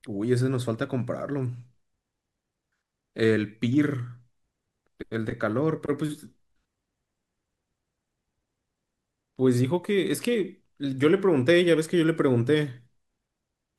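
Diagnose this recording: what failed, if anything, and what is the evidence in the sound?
Nothing in the signal chain fails here: the speech recording holds steady throughout, with no breaks, level disturbances or added noise at any stage from capture to playback.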